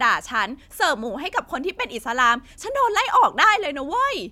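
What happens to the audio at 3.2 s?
Nothing goes wrong at 3.2 s; the speech continues intact through that moment, with no dropout, click or distortion.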